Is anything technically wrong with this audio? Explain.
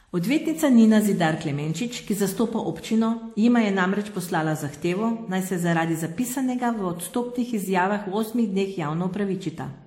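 Yes. Throughout the speech there is transcoding between lossy codecs: nothing above 16.5 kHz, with two distinct families of compression artefacts layered together, which fits a low-rate MP3 likely re-encoded as WMA 1. A single lossy codec would leave only one artefact signature.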